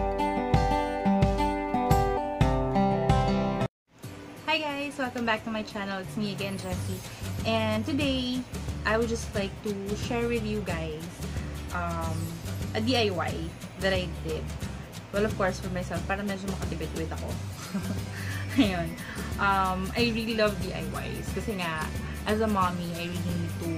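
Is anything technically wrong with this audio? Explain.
Yes. Compressed frames skipped: at 2.16, 7.76, 12.29 and 20.30 s, whole compressed frames are dropped, so the audio jumps ahead by roughly 150, 50, 100 and 50 ms, multiples of a 23.2 ms frame. Each join is heard as a sudden jump forward in the audio.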